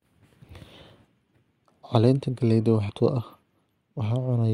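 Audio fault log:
2.89–2.92 s, stream segment skipped: the speech jumps abruptly forward, with a short blip at the join lasting about 24 ms, and the flow of the sentence breaks because material before and after the cut does not connect. The likely cause is a segment of the stream that failed to load, so the player moved straight on to the next one and spliced two unrelated points of the programme together without any crossfade.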